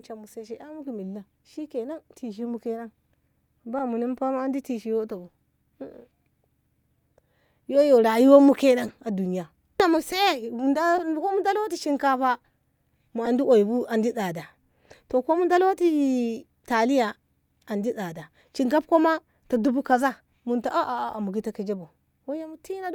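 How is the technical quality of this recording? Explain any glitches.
The speech carries four brief corrupt frame decoded glitches at 3.79–3.81 s, 8.87–8.91 s, 10.97–11.01 s and 13.25–13.28 s. Damaged compressed frames were decoded anyway, so misread gains and codes scatter energy across wrong frequencies. Each is heard as a short chirp, squeak, blip or burst of noise peaking around -15 to -25 dBFS. On a spectrogram each is a thin vertical smear.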